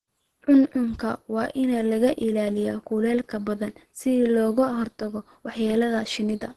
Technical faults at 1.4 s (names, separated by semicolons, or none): Opus compression